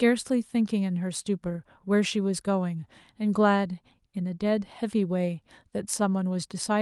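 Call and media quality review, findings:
No faults found in this speech clip. It carries the sound of a working call path, with the top end stopping at about 12 kHz and the usual coding texture of a wideband codec such as Opus.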